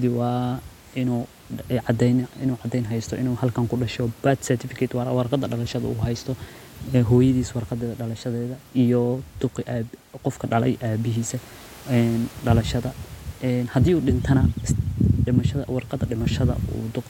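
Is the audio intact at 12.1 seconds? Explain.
Yes, the audio is intact at 12.1 seconds, with only the room's own background noise sitting about 26 dB below the speech, as it does naturally in the recording.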